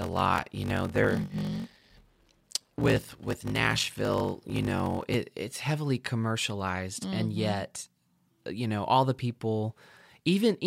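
From 0.0 to 5.14 s, a block size mismatch (padded): one stage delivers shorter blocks than the next reads, which fits a 1024-sample read, and zeros fill each gap. This buzzes at 46.9 Hz and slows the speech to 0.861 times speed, timbre kept, until "it's heavily commercialized".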